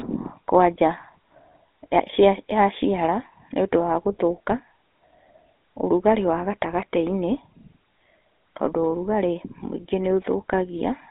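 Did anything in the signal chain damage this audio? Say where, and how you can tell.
Yes: the codec stage. GSM full-rate damage runs throughout as a buzzy, gravelly texture, consistent with 13 kbps. A spectrogram shows energy only between 250 Hz and 3.7 kHz, with blurred harmonics.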